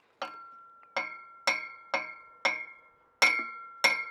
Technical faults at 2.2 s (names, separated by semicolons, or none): none